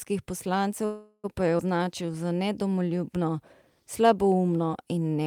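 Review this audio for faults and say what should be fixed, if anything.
Packets were likely held up in transit, draining the jitter buffer and causing a call audio freeze from 0.85 to 1.26 s. The receiver stretched the last sound into a fading fill for about 383 ms, then resumed where it stopped, so nothing is lost but a gap is inserted. Steadier network routing or a deeper jitter buffer target would prevent this.

At 1.58 s a short stretch was dropped while later audio was already queued, producing a skip ahead. Roughly 70 ms of sound vanishes and the two sides are spliced with only a tiny gap of about 11 ms. Letting the buffer drain gradually instead of dropping audio would fix this.

From 1.77 to 2.43 s the jitter buffer was rebuilding its reserve, repeating single pitch periods to add 81 ms. This jitter buffer slow-down plays the sound at about 89% speed at unchanged pitch, so it seems drawn out. 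Spreading the adjustment into pauses would make it far less audible.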